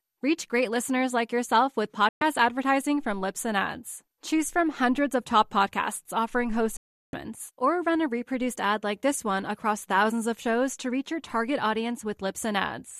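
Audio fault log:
2.09–2.22 s and 6.77–7.14 s, digital broadcast dropout: the speech is muted twice, first for about 120 ms and then for about 360 ms. Each gap opens and closes with a fade of about 3 ms, so the cuts are abrupt but don't click. This is consistent with a receiver losing the signal or rejecting corrupted frames, staying silent until valid frames return. The gap lengths fit runs of five and fifteen 24 ms frames, and the audio sent during each gap is gone.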